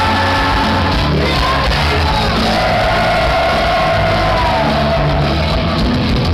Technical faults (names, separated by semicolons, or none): none